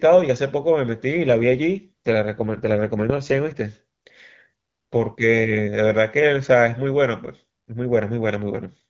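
Speech that turns rougher and more synthetic from 1.12 to 3.60 s and again from 8.35 to 8.83 s, with no gap or loss of band, then clears. The roughness fits an AMR rate drop on the HD Voice link, from about 12.65 to 8.85 kbit/s, as a weak radio connection trades speech bits for error protection.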